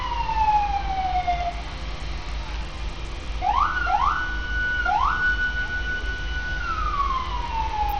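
Throughout, the treble flickers and drops out under a gritty haze. This is likely Bluetooth SBC compression at a starved bitrate, fitting roughly 80 kbps. A spectrogram shows patchy, blocky upper bands.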